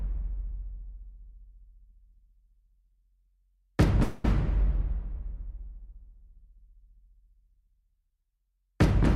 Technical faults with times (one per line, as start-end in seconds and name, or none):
4.03-4.25 call audio freeze